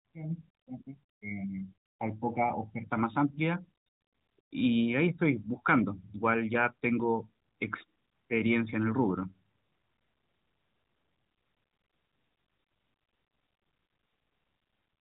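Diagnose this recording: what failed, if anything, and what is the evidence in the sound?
Nothing stood out on listening; no stage of the chain shows a failure in this speech recording.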